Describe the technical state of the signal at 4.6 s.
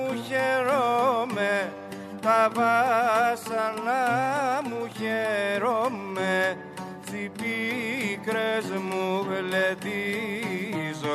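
The signal at 4.6 s is intact, with no fault audible at that moment.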